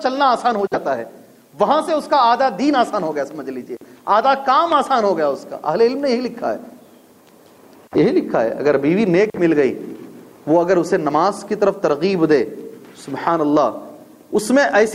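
No technical faults can be heard at any point in the audio.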